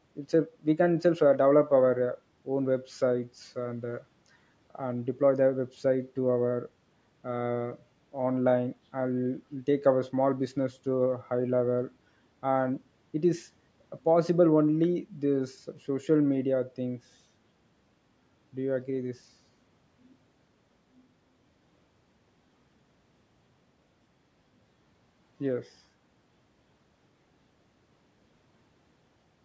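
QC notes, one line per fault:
No faults found: the speech carries the normal signature of call microphone processing, with the lowest bass trimmed by its high-pass filter and no content above 8 kHz.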